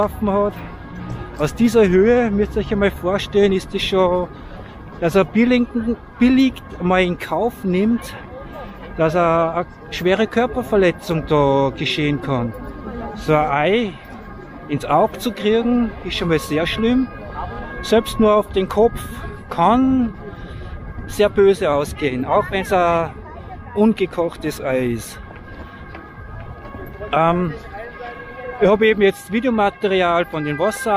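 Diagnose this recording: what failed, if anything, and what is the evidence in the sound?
A drift correction step runs from 21.72 to 23.09 s: for about 1.4 s the sound plays roughly 5.3% fast, raising pitch by about 90 cents, close to a semitone, before snapping back to normal rate. Speed and pitch move together and change abruptly rather than gliding. This is likely the driver or buffer stage, where clock-matching software stepped its playback rate in one jump to rebalance its buffer between two unsynchronised clocks.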